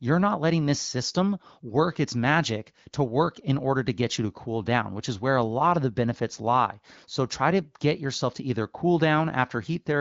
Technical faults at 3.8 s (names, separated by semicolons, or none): none